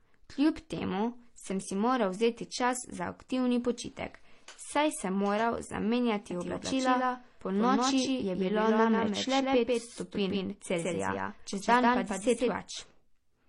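A speech recording carries two stacked faults. Throughout, nothing reaches above about 11.4 kHz, and the speech has two layers of coding damage at once, the artefacts of both codecs heard together. That combination points to transcoding between lossy codecs, likely a low-rate MP3 re-encoded to HE-AAC. On a spectrogram the top edge is a hard flat ceiling, with blocky, patchy gaps in the upper bands. From 6.31 s to 12.55 s a doubled audio track appears. A second copy of the speech, at roughly the same level, trails the first by around 150 ms, with no reverb tail or room colour, and it switches on and off abruptly. That is likely a second capture path or an edit leaving two copies out of step. The waveform shows every syllable repeated slightly later in that span, and the spectrogram shows each harmonic pattern duplicated side by side.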